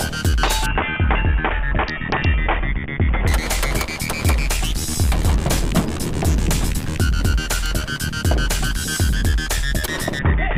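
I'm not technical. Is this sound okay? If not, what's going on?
No. From 0.66 to 3.27 s, and again from 10.19 s to the end, the sound turns dull and gritty. This is a Bluetooth SBC bit pool drop. The wireless link got crowded, so the phone sent far less detail. Treble dulled and rough noise crept in.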